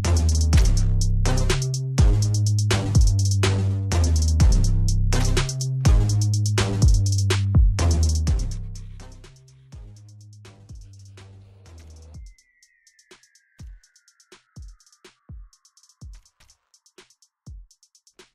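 Nothing here stands out as a technical fault; it's an easy listen with no dropouts, glitches or other problems to point to.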